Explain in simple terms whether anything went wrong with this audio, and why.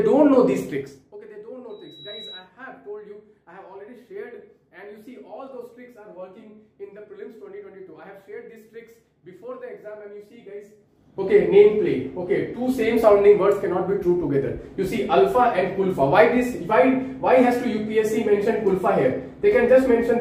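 Yes, two things went wrong. The first is zipper noise, heard from 0.68 to 1.17 s as the sound is turned sharply down, and again from 10.78 to 11.29 s as it is turned back up. Instead of gliding, the volume moves in rapid tiny jumps, about a hundred each second, and every jump leaves a faint click. Together the clicks make a fine buzzy ticking that lasts only while the volume is moving. That's how it differs from crackle or dropouts: it appears only during those level changes and stops once the new level is reached.

The second is a loudspeaker feedback squeal, from 1.69 to 2.50 s. A microphone picked up its own loudspeaker, and one pitch, a high 3.9 kHz whistle, kept looping around and growing. It swells over roughly 0.4 seconds until it is louder than the sound itself. Unlike a steady hum or a test tone, it starts from nothing, climbs by itself and sits on a single piercing pitch.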